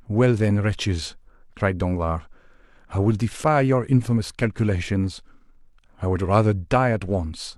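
No technical faults are audible anywhere in the speech.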